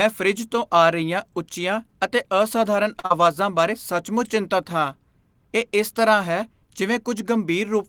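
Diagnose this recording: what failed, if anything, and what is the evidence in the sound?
Network trouble, first a short stall from a late packet. Right after "ਰਹੀਆਂ ਉੱਚੀਆਂ ਅਤੇ ਅਸਧਾਰਨ", from 2.99 to 3.06 s, the jitter buffer ran dry, so the receiver held the last sound for 43 ms until the packet arrived. Nothing's lost, but playback now runs 43 ms later.

Straight after, from 3.06 to 3.12 s, there's a short concealed packet loss. About 40 ms of speech never reached the decoder, and the receiver papered over it by extending the previous sound for 42 ms before blending back in, which leaves a brief smear at the join.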